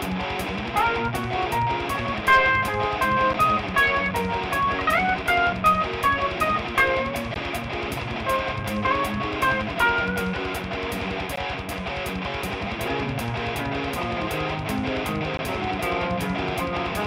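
At 3.33, 7.34, 11.36 and 15.37 s there's a gap between stream segments: 9 to 17 ms of hard-edged silence, every 4 s, where segment timestamps don't line up.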